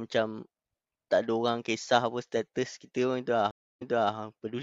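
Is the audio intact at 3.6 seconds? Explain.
No, a stream reconnect runs from 3.51 to 4.13 s. The connection broke and the player fell silent for about 0.3 s, then restarted its decoder mid-stream. The server resent buffered audio, so the speech resumes about 0.33 s earlier and repeats material.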